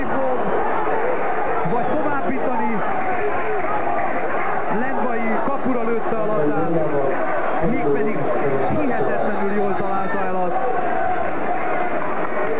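The sound arrives over a call link, G.711 mu-law at a rate that points to 64 kbps, so the spectrogram shows nothing above 4 kHz. A DC offset runs through the whole clip. The waveform sits shifted off the zero line by a constant amount, eating headroom on one side, and a spectrogram shows a steady band of energy pinned at the very bottom. There is also clock drift between sender and receiver. The sender's clock runs around five percent fast, so the receiver's jitter buffer keeps filling and the receiver has to discard audio to keep up. That produces repeated timing corrections from 0.03 s to 12.53 s. Short pieces are cut out at uneven intervals, all in the same direction, so playback runs at about 103% speed. On the waveform these show as small seams where the segments were joined.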